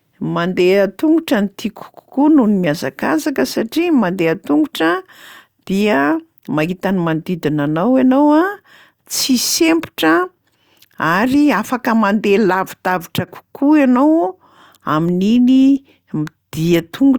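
Nothing goes wrong anywhere in this bit of speech, so there's no fault to point to at any moment.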